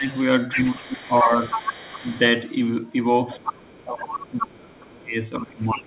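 The speech ducks right at the start, from 0.0 to 0.09 s, by roughly 15 dB, and again from 0.53 to 1.32 s, where it sinks by a similar amount. A brief, shallower dip of about 5 dB follows at 2.0 to 2.05 s. From 3.4 s to the end the talker is pushed down hardest, by around 25 dB. This is speech suppressed in double talk. Both ends were likely talking at once, and the echo canceller, unable to tell the local talker from loudspeaker echo, turned everything down.

Overlapping these dips, a second voice comes through from 0.52 to 2.19 s. It is fairly prominent, only about 5 dB under the talker. It returns more faintly from 3.31 to 4.91 s, roughly 20 dB down. This is the other side's voice leaking through, likely because the far end played on the local loudspeaker reached the microphone and the echo canceller did not fully remove it.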